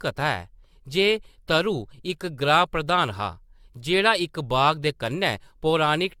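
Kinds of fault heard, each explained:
Generation loss: throughout the speech the sound is swirly, smeared and hollow, more than a single lossy encode at this quality would produce, and consonant attacks are blurred. The likely cause is repeated re-encoding, around seven passes, in a chain that fits AAC-LC at 96 kbit/s. Each pass requantises on a shifted frame grid, so the errors pile up. On a spectrogram nothing appears above 17 kHz, and the upper bands show mottled holes and smeared patches. The waveform shows softened transients.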